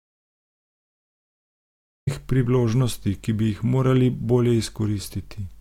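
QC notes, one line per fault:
0.00–2.07 s, audio dropout to silence: the input path was likely cut off before the clip began, through a lost device connection or a mute left engaged, while the recorder kept writing silence. The clip therefore opens already in dead silence with no room tone or noise floor at all, and the speech arrives abruptly mid-flow at "priložnosti ki bi", so whatever came before that point is missing rather than merely quiet.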